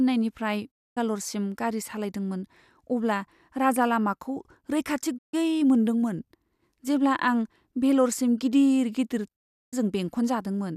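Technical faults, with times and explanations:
0.70–0.98 s, 5.17–5.35 s and 9.34–9.74 s: digital broadcast dropout. The speech fades out in about 20 ms and falls silent for 240 ms, 144 ms and 360 ms. Lost or corrupted frames were muted by the receiver. That speech is gone, not delayed.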